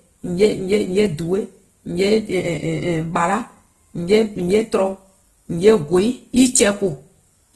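This is a speech clip, and the whole thing carries plainly audible codec damage, likely from Opus compression at a low rate, somewhere around 16 kbps. The sound is grainy and a bit rough rather than swirly: the bands are kept filled, but with noise standing in for real detail. That points to the music-style CELT mode. There's also nothing above 12.2 kHz, so the top end is shelved off.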